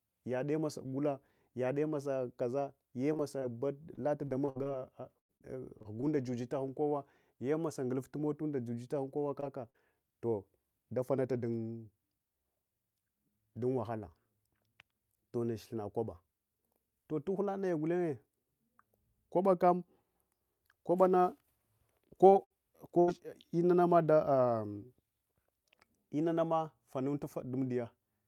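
From 3.13 to 6.04 s, between "gula yade masa kaza" and "jujatahun kowa yemosa nguluftu", the speech turns choppy and robotic. This is repeated packet loss. About a dozen holes open one after another, the longest near 95 ms, and each is patched by stretching the last sound, adding up to roughly 370 ms of synthetic fill, about 13 percent of the stretch. What sets it apart from isolated dropouts is the rapid recurrence. The gaps come too close together for the speech to settle, so the whole passage takes on a choppy, stuttering texture rather than a single blemish.

Short concealed packet loss appears at 9.40 to 9.44 s, just after "mota juja taghun kowa", at 9.70 to 9.76 s, just before "toh davanunta dun", and at 22.30 to 22.34 s. Each hole lasts only 20 to 40 ms and is filled by continuing the preceding sound before blending back into the real audio. The result is a brief smear or wobble, and a consonant can go missing. 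Unlike a burst, the repair is too short to build a held buzz or an audible fade.

A burst of packet loss follows at 22.44 to 22.52 s, about 60 ms, and again at 23.00 to 23.09 s, about 80 ms. Here the concealment runs long enough to decay. The last sound is held as a buzz or hiss that dies away, and the speech then resumes further on with a chunk missing, a longer gap than the short smears.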